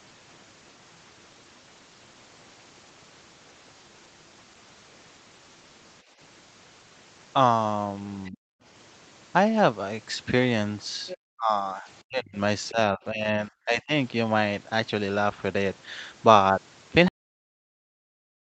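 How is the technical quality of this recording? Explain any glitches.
The recording has several echo-canceller problems in the middle and an abrupt cut at the end, on a call path whose band stops at 8 kHz.

From 6.02 to 6.19 s the background is gated by the echo canceller. It clamped the microphone while the loudspeaker played, so the room sound dips by about 11 dB for a brief moment.

The other side's voice leaks through at 8.25 to 8.30 s and again at 11.07 to 11.17 s, likely because the canceller left residual loudspeaker echo. The first scrap is very faint; the second is louder, about 15 dB below the speech.

Speech is suppressed in double talk at 8.30 to 8.57 s, 11.36 to 12.38 s, 12.70 to 13.28 s and 13.46 to 13.93 s. With both sides talking, the canceller likely ducked everything. The talker nearly vanishes in the first, second and fourth stretches, and dips only mildly in the third.

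There is a cut-off end at 17.08 s. The final buffers were never written, so the sound stops mid-stream and drops straight to digital silence with no decay, lasting to the end of the clip.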